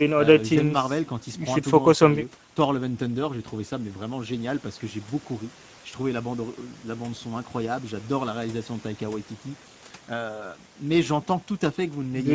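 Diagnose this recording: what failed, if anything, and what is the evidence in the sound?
Speex codec damage runs through the whole clip at the codec stage. Speech sounds hoarse and noisy because the CELP coder has few bits for the excitation. The band up to 8 kHz above 4 kHz is only shaped noise fill, which fits a middle-quality wideband setting near 16.8 kbps.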